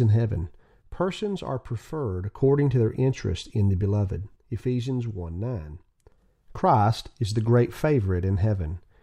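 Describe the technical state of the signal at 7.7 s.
At 7.7 s the speech signal is intact, with no audible fault at that moment.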